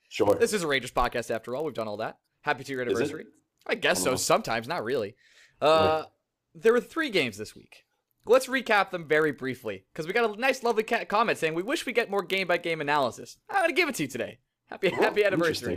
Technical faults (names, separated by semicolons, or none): block size mismatch (padded)